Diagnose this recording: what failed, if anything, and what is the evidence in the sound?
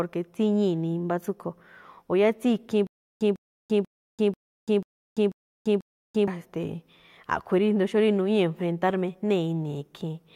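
The speech breaks into a stutter with silent gaps from 2.87 to 6.28 s. A 150 ms fragment repeats seven times, each followed by about 340 ms of digital silence, on an even 490 ms cycle, and the speech that belonged in that stretch never arrives. The likely cause is a stalled player or stream buffer that replays its last fragment on each retry and then runs dry. Repetition separates it from a simple dropout, and the true silence between bursts separates it from a seamless loop.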